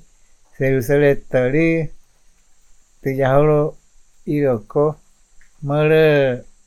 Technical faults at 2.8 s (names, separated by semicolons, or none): none